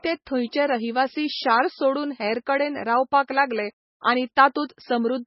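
Throughout the speech, the sound is watery and swirly, with nothing above 5.6 kHz. This is likely heavy MP3 compression, consistent with a bitrate near 17 kbps: short of bits, the encoder cut the treble and let weak frequency lines flicker between frames.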